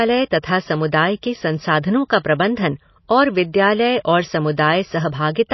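Speech runs through the whole clip with plainly audible MP3 compression damage, likely from encoding at a bitrate low enough to fit about 24 kbps. Nothing survives above 5.8 kHz, where the encoder cut the treble to save bits. A simple low-pass filter would only dull the sound. Here the weak spectral lines that remain also flicker on and off between frames, giving the watery, swirling texture that marks codec starvation.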